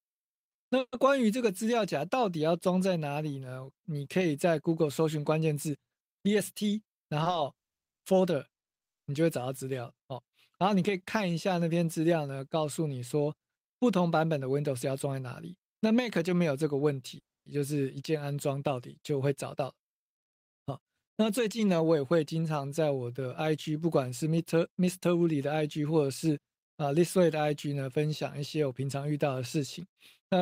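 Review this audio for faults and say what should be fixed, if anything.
Call audio freeze at 0.79–0.94 s and 17.19–17.48 s: the speech stops and the last sound is stretched into a decaying buzz, then silence. The first is 130 ms with about 60 ms silent. The second is 270 ms with about 250 ms silent. The likely cause is held-up packets emptying the jitter buffer. Speech then resumes where it stopped, with nothing lost. On a spectrogram the final frame smears horizontally and fades into a blank band. The waveform shows a tapering tail, then flat line.

Jitter buffer speed-up at 6.41–7.23 s (108%, roughly 70 ms removed), 14.63–15.45 s (109%, roughly 100 ms), 19.46–22.2 s (106%, roughly 200 ms) and 24.22–25.35 s (107%, roughly 100 ms): the receiver drained excess buffered audio by cutting out pieces of one or a few pitch periods. Speech sounds hurried at unchanged pitch. On a spectrogram the harmonics keep their spacing while syllables compress in time. 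The waveform shows periodic cycles missing.

Short stall from a late packet at 7.24–7.28 s, right after the first speed-up: a packet arrived late, so 20 ms of the preceding sound was stretched before playback continued, with nothing missing. This produces a brief held sound with a slight buzz or dip. It appears as a short horizontal smear in the spectrogram and a repeated cycle in the waveform.

To prevent these faults, stabilise packet delivery on the network path and give the jitter buffer enough headroom that it neither runs empty nor has to compress speech afterwards.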